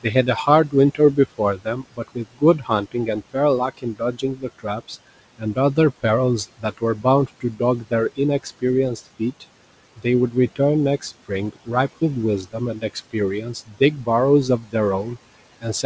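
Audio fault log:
throughout: noise suppressor artifacts. The suppressor is estimating the steady background and pulling those bands down by about 17 dB frame by frame. The room noise, which sits about 20 dB below the speech, drops away in the gaps and swells back under each phrase, over a top end that stops at 8 kHz.
0.03–15.85 s: speech cut by the noise suppressor. Across nearly the whole clip the suppressor mistakes quieter parts of the speech for background and turns them down with it, by as much as about 19 dB at the deepest points. Soft consonants, word endings and low-level stretches come out swallowed or faint, because the gain meant for the noise is applied to speech energy sharing the same bands and frames.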